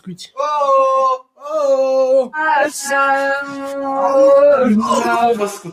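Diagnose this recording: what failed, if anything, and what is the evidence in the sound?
The call-processing stage failed here: sound was cut by the noise suppressor between 1.19 and 1.44 s, dipping by about 12 dB at its deepest, over roughly 150 ms. Unlike a dropout, the signal never vanishes. It sinks, and sustained, decaying parts lose level while sharp onsets pass.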